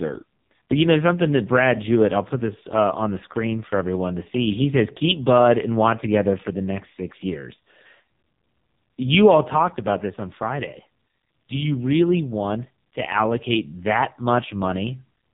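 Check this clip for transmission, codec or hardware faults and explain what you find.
One fault is present across the entire clip: AMR narrowband mobile codec coding. Nothing above 3.8 kHz survives, because AMR-NB samples at 8 kHz and rebuilds speech from a vocal-tract model driven by a few pulses per subframe. The damage is heavy. The speech sounds buzzy and synthetic, which fits one of the codec's lowest modes, around 5 kbps.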